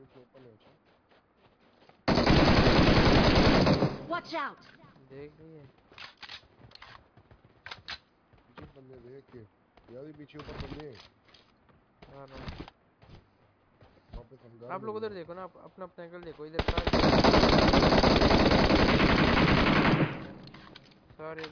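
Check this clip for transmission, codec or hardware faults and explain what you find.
Nothing in the clip stood out as a fault on listening.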